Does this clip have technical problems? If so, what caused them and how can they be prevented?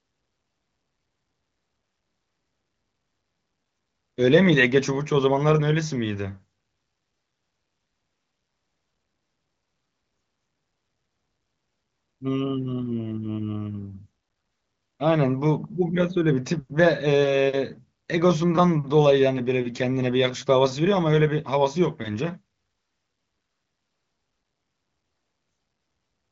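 No, the speech comes through an AMR wideband (HD Voice) connection at 23.05 kbit/s, with content stopping around 7.5 kHz as expected for that path, and nothing audible points to a technical problem.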